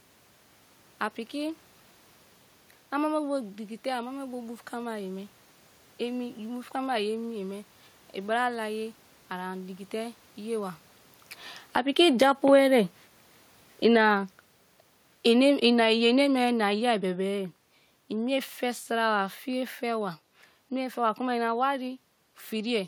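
Automatic gain falling, from 11.61 s to 22.82 s. The gain control judged the input too loud, or its background noise too strong, and began lowering its gain gradually rather than in one step. By the end of the clip the level has dropped by about 13 dB. Because the gain acts on the whole signal, the room noise sinks along with the speech. That distinguishes it from the talker shifting position around 11 s, which would change only the voice level.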